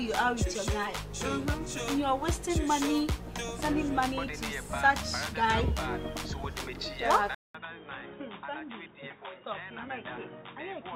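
At 7.35 s the recording likely switched its input to a poorer device, and it stays there until the end at 10.95 s. The switch leaves a gap of silence of about 200 ms, after which the sound comes back dull and boxy, with nothing above 3.8 kHz. It also drops roughly 10 dB in level and picks up a new background noise sitting well below the signal.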